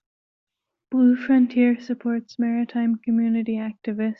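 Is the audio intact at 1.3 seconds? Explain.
Yes, the audio is intact at 1.3 seconds, with no audible fault at that moment.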